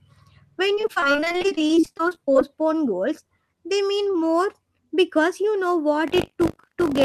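From 0.75 to 2.43 s, just before "goals they mean", the stream suffers repeated packet loss (robotic sound): dozens of short dropouts, each up to about 26 ms, are patched by stretching the previous sound, so about a third of the stretch is filled-in material and the speech turns choppy and robotic.

From 6.06 s to the end, after "because you know", buffer tearing sets in: the writing program and the hardware read pointer have slipped and cross inside every period, so a small slice of each buffer replays audio from around 40 ms earlier, producing a steady 50 Hz rattle over the speech.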